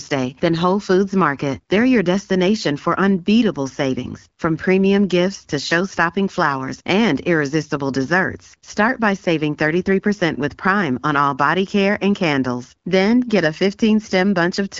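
Nothing stood out on listening to the speech, which comes through the AMR wideband (HD Voice) codec at 12.65 kbit/s with content reaching up to about 7.4 kHz.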